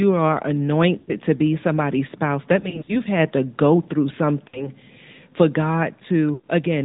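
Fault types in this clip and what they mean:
AMR narrowband mobile codec: The speech passed through the AMR-NB mobile codec, which samples at 8 kHz and rebuilds the voice from a vocal-tract model fed with a few pulses per subframe. Nothing above 4 kHz survives, so the speech sounds muffled and telephone-like throughout. The buzzy, synthetic edge is plainly audible, and the amount of damage fits a mid-rate mode of roughly 10 kbps.
Lost AMR speech frames: Some speech frames failed their checksum, and the decoder filled each gap by reusing the last good pitch and vocal-tract settings at falling gain. Around 0.98 to 1.12 s, about 100 ms is smeared and fades just before "to be somebody's spouse". Between "be somebody's spouse that" and "had to go through", short losses scattered across 2.60 to 2.96 s cause brief dips and warbles. Two further dropouts follow, at 4.48 to 4.71 s and 6.34 to 6.45 s.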